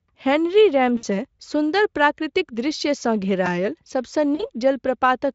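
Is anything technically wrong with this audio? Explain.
Yes, two kinds of fault are audible.

VoIP packet loss concealed by the speech codec occurs at 0.97–1.04 s, just before "सुन्दर प्राकृतिक दृश्यसँ", and again at 4.35–4.43 s. With about 60 ms and 40 ms missing, which fits three and two 20 ms frames, the decoder extends its last pitch and filter at falling gain. The result is a brief buzzy, fading smear.

A repeated buffer appears at 3.46 s, right after "सुन्दर प्राकृतिक दृश्यसँ". Fresh audio arrived late, so the same tiny slice, consistent with a 128-sample buffer of about 2.9 ms, played three extra times. This causes a short click-like buzz and drops around 10 ms of sound.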